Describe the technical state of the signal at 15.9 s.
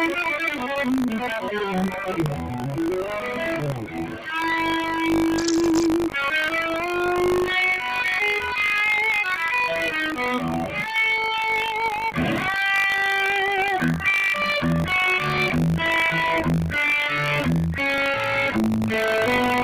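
At 15.9 s, as everywhere in the clip, a noise suppressor applied to music or sounds is at work. It treats sustained parts and decaying tails as noise and pulls them down by about 5 dB. Onsets pass, so the sound pumps and thins between attacks.

Buffer tearing is also present throughout. The writer and reader of the playback buffer have drifted until they cross each period. A small slice of each period, a few percent, repeats audio from about 70 ms earlier. The hard joins give a steady 50 Hz rattle under the signal, which fits a 20 ms period.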